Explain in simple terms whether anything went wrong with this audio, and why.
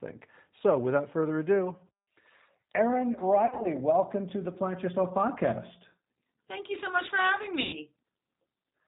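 Two things went wrong with this speech recording.

Throughout, the sound has passed through the G.729 codec, a low-rate telephone codec used for internet calls. It does not store the sound itself. It stores a rough model of the throat's filter, the pitch and a few pulses every 10 ms, and rebuilds speech from that. Everything above 4 kHz is discarded, so the voice sounds muffled and plainly rough and synthetic.

There is also VoIP packet loss concealed by the speech codec, at two points. From 3.46 to 3.68 s, just before "welcome to the", about 110 ms of data went missing in short gaps scattered over 180 ms, the longest lasting 40 ms. From 7.62 to 7.76 s, right after "so much for having", a similar amount went missing. In both places the decoder fills the gaps by repeating the last pitch and filter it received at falling volume, which gives a buzzy or noisy, fading smear. Each rebuilt frame depends on the one before, so the voice stays weak or distorted briefly after the data returns.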